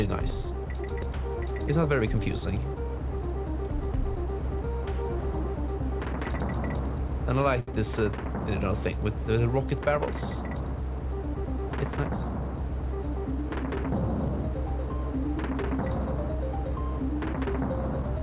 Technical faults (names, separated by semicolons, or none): short stall from a late packet; jitter buffer speed-up